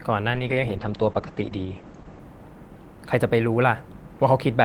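From 0.34 s to 2.27 s the call's bandwidth estimate collapses, and the encoder is pushed from 32 kbps down to 11 kbps, holding that floor for about 1.9 s. This is a call bitrate drop. With so few bits, the codec quantises the speech far more coarsely and narrows its coded band from 20 kHz to 8 kHz. The voice turns muffled and rough and watery, losing its airy top end until the rate recovers.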